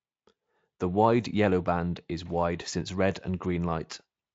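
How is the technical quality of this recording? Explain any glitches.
There are no glitches to explain: the speech comes through a Speex codec at a generous 34 kbps, with content reaching up to about 7.6 kHz and nothing above that, and any trace the coding leaves is faint at most.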